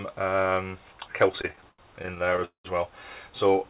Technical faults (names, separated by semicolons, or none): repeated stalls (stutter)